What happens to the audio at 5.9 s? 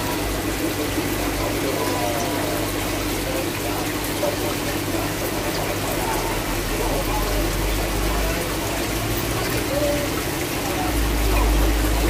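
At 5.9 s the DECT cordless phone buzz is present, as it is throughout the clip. A nearby DECT handset or base pulses radio bursts 100 times a second. The audio circuitry rectifies them into a thin, steady 100 Hz buzz, rich in harmonics, about 15 dB below the signal.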